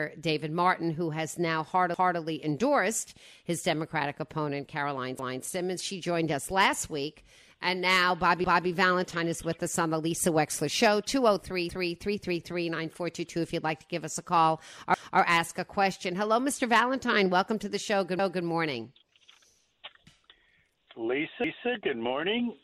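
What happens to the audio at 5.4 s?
From 5.19 to 5.44 s, overlapping chunks replay 250 ms at a join, heard as a stutter. The waveform shows that stretch duplicated after a sharp seam.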